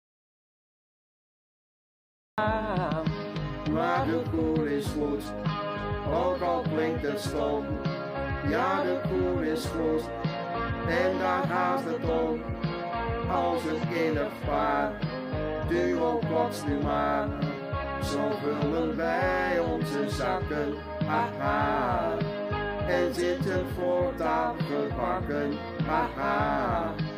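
From the very start until 2.38 s the clip is in an audio dropout to silence: complete silence with no room tone, likely from a lost input while recording continued. The waveform sits flat, the spectrogram shows a blank strip, and sound enters abruptly mid-flow.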